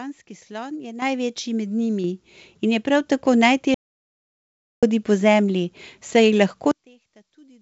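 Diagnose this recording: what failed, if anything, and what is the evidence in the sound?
Microphone volume stepped up at 1.02 s and again at 2.04 s: speech and background noise jump together, by about 9 dB and then about 5 dB. This is call processing, where automatic gain control raised the device's input volume in single steps rather than ramping it.

Audio dropout to silence from 3.74 s to 4.83 s: the speech cuts off and 1.08 s of silence follows, with no room tone, before sound resumes mid-flow. The likely cause is a lost input at the device or driver stage while the recorder kept writing zeros.

One channel inverted from 6.71 s to the end: in the mono sum the centred speech falls by about 32 dB, leaving only a faint residue. This is in the wiring or channel-mapping stage, where one stereo channel most likely has reversed polarity, so the shared content cancels. The G.722 call path at 64 kbps, with nothing above 8 kHz, accounts for the band limit throughout.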